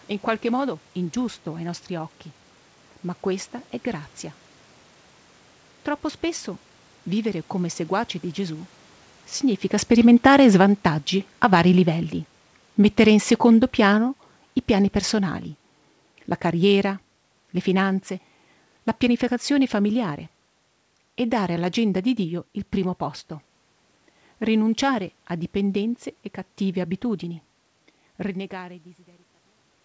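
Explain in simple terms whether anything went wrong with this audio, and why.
Between 9.43 and 20.08 s, automatic gain falling lowers the level steadily, and the room noise sinks along with the speech, unlike a talker moving away.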